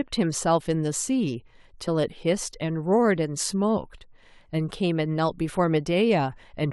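At 1.87 s the speech jumps forward. Compressed frames were skipped: about one 23.2 ms frame never reached playback, lost from the file or rejected by the decoder as damaged. Roughly 20 ms of audio vanishes.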